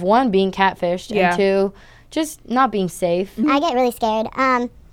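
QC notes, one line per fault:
3.44–4.92 s, section at the wrong speed: after "just not being safe" the speech plays 1.32 times too fast and sounds hurried and about five semitones higher, likely from being fitted to the wrong clock. On a spectrogram the harmonics and formants step upward at 3.44 s, and the waveform's syllable envelopes are squeezed closer together.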